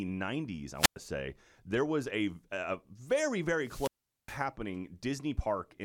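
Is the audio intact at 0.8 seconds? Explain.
No. A wireless microphone squelch dropout runs from 0.75 to 0.97 s: the radio link fades and the receiver's squelch mutes the output. The speech gives way to rising hiss, then roughly 105 ms of near silence, before returning.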